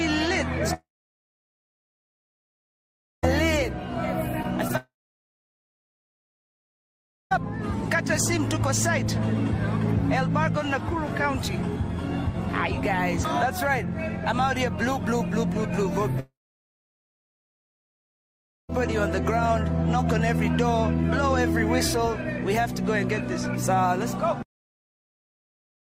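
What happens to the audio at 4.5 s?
A brief smear or wobble passes through the sound from 4.43 to 4.46 s. This is short concealed packet loss: about 20 ms of audio arrived too late to decode, and the receiver covered the gap by extending the preceding sound before blending back into the real signal.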